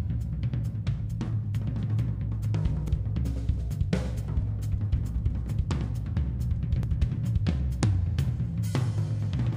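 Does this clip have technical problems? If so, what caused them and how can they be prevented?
Yes. At 2.88 s and 6.83 s, roughly 50 ms of sound vanishes and the two sides join with no silence. This is audio missing between chunks, likely from the recorder dropping samples each time it closes one 4-second chunk and opens the next. On a waveform each appears as an abrupt seam; on a spectrogram, as a sharp vertical edge where the patterns jump. Double-buffering the handoff so a new chunk starts before the old one closes would prevent it.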